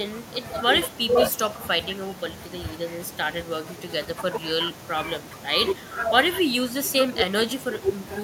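From start to finish the far end is playing the call through a loudspeaker while its microphone stays live, and no echo canceller strips that pickup out, so this is echo with no canceller. The talker's own speech returns after a round trip of roughly 300 ms, sitting about 22 dB below the direct signal. Each phrase trails a faint, thinner copy a third of a second behind.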